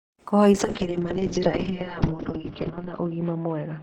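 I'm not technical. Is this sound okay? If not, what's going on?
No. From about 0.52 s to the end, a call bitrate drop makes the speech turn rough, watery and muffled, losing everything above about 6 kHz. Unlike a dropout, the sound never stops; it keeps going, just coded far more coarsely.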